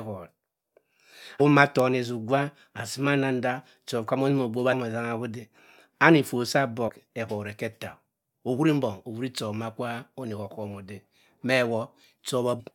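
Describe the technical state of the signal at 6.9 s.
Damaged data in a compressed stream disrupts the speech from 6.88 to 6.90 s. A short run of the encoded data is wrong there, so the decoder cannot make sense of those frames. It discards or misreads them, loses its place in the stream, and has to hunt for the next valid frame header before decoding resumes. For roughly 24 ms this produces a brief chirp or blip, a sharp foreign sound cutting into the speech.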